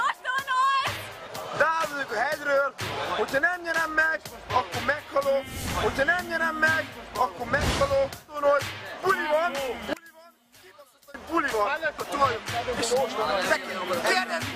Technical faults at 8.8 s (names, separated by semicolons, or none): none